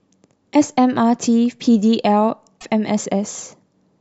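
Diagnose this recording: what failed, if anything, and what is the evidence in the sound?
The compressed speech stream carried damaged data, so the codec decoder misread the corrupted frames and lost sync until it found the next valid frame header. The result is a short glitch in the speech from 2.58 to 2.63 s.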